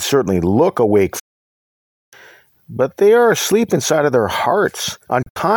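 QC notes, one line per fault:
1.19 to 2.15 s, digital broadcast dropout. The speech fades out over 8 ms and stays silent for almost a second. The receiver lost good frames and muted. The speech sent during that gap is gone.
5.22 to 5.37 s, digital broadcast dropout. Short holes break the speech, totalling 96 ms over 128 ms. The longest hole is 64 ms. Each hole is a brief mute on bad frames.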